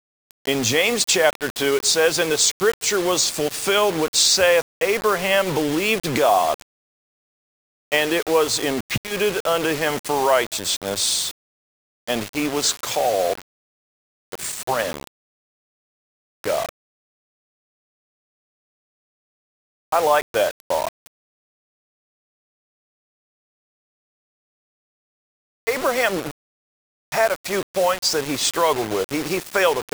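A gritty, grainy distortion runs through the whole clip. It rides on the sound itself, swelling and changing as the audio moves, and quiet passages break down into a coarse, sputtering texture or fall to silence. The error sits only about 15 dB below the signal. This is low bit depth without dither. The audio was likely rounded to about 5 bits with no dither, so the error tracks the waveform instead of forming a steady noise floor.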